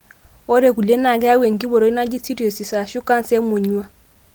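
No technical faults can be heard in this speech. The Opus voice compression is audible only lightly, in a mode that points to around 20 kbps, and it keeps the full band with content reaching up to about 20.2 kHz.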